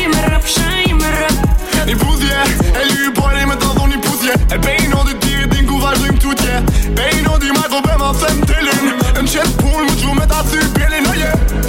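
No dropouts, glitches, distortion or level problems turn up anywhere in the recording.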